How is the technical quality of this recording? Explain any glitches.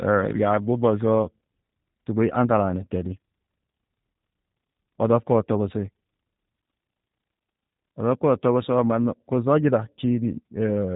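The recording is heavily compressed by a low-bitrate voice codec. From start to end, G.729 codec damage is plainly audible: a rough, synthetic speech timbre, consistent with an 8 kbit/s coder rebuilding each frame from a vocal-tract filter, pitch predictor and sparse pulses. Nothing reaches above 4 kHz. A plain band limit would dull the sound without that buzzy, artificial texture.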